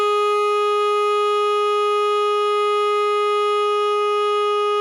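Music, with no audible technical faults anywhere.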